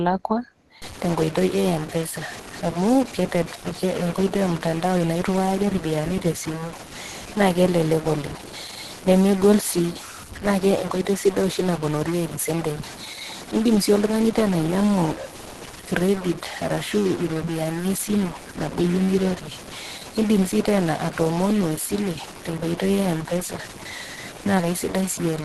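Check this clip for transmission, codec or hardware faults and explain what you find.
Two faults are present in this speech clip: codec damage across the whole recording, and a digital distortion from 0.82 s to the end.

Opus compression is the likely cause of the band-limited, hoarse quality heard throughout. The encoder appears to be in its hybrid speech mode at a low rate, about 16 kbps. Detail above 12.1 kHz is discarded, so a spectrogram shows a hard ceiling there, with grainy, smeared bands below it.

A stuck bit is likely from 0.82 s onward. One data bit is held fixed, so about half the samples shift by that bit's weight depending on the waveform. The result is added distortion, and the pauses fill with noise. On a waveform the gaps show a raised floor instead of silence. A spectrogram shows broadband hash spread through the quiet stretches.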